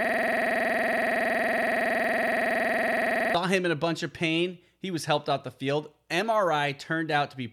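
From the very start to 3.35 s, a system hang loop holds the speech. One 46.44 ms piece repeats exactly, dozens of times, which fits a 2048-sample buffer. The driver froze while the hardware kept cycling. It sounds like a rough 21.5 Hz buzz. Normal speech resumes with "him in".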